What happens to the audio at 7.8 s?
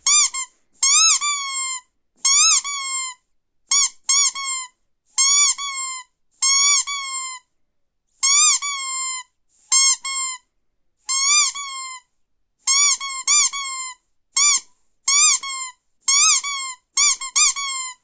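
Nothing goes wrong at 7.8 s; the audio is intact there, with no dropout, click, distortion or other fault at that moment.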